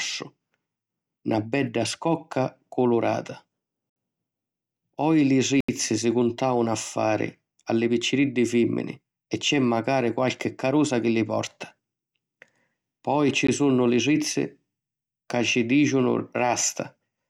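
At 3.90 s, 5.60 s and 13.47 s the speech drops into a block of digital silence lasting 65 ms, 80 ms and 15 ms. These hard zeroed gaps cut out and back in with no fade, unlike a smoothed dropout.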